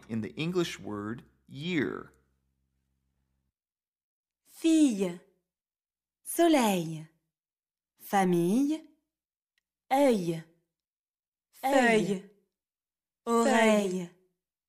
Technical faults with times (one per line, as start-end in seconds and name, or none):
11.63-14.69 doubled audio track